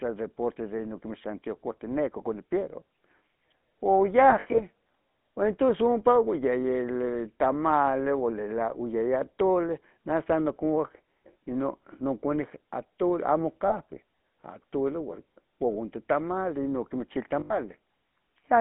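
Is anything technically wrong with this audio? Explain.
Yes. The whole clip is coded with the GSM full-rate codec, and there are lost GSM frames at three points.

Throughout, the speech is confined to roughly 150 Hz to 3.5 kHz and carries a plainly audible buzzy, gravelly roughness. That roughness comes from the codec's vocal-tract model being driven by sparse, regular pulses, which fits a 13 kbps rate. This grain is what separates it from simple band-limited telephone filtering.

Lost GSM frames appear at 4.30–4.61 s, 13.68–13.71 s and 17.40–17.58 s. The decoder repeats the last good frame's settings, so the sound hangs as a brief metallic ring rather than dropping to a clean gap. At 4.3 s about 140 ms is lost, scattered over 280 ms, with the longest run around 70 ms, so the ringing flickers. At 17.4 s, 100 ms is lost.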